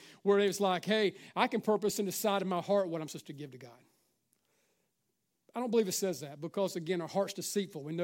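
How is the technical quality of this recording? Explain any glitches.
No glitches are audible anywhere in this speech recording, so there is nothing to explain.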